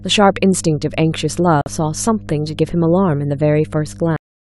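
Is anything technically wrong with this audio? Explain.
Yes, there are three faults in this speech clip.

Mains hum runs throughout: a steady 50 Hz tone with some low harmonics, roughly 20 dB below the speech. A ground loop or nearby transformer is letting the power line couple into the signal path, laying a constant low drone under everything.

A corrupt frame muted gap runs from 1.61 to 1.68 s. Damaged compressed data was rejected by the decoder, and the player filled the 68 ms hole with silence, which fits about three codec frames. The speech drops out abruptly, and the timing afterwards stays intact.

A cut-off end occurs at 4.16 s. The final buffers were never written or played, so the speech stops mid-sound and falls straight to digital silence with no natural decay, leaving the last 0.3 s empty.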